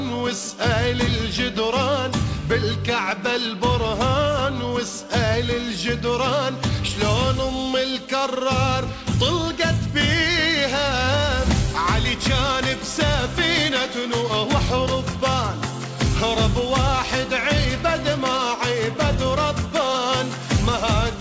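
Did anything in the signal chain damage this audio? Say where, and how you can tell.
No, nothing in the chain damaged it: the audio came over an ordinary call path through a G.722 codec, and the top of the band simply stops at 8 kHz, which is just how that codec carries it.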